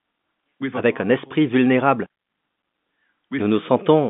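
No technical faults are audible.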